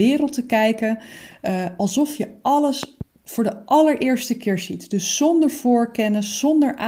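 A speech clip with a loud pop, actually two sharp pops in quick succession between 2.83 and 3.03 s, standing roughly ten decibels above the speech, which continues underneath. The likely cause is a voltage spike from a plug, switch or static discharge. On a waveform they show as two tall spikes; a spectrogram shows thin vertical broadband lines.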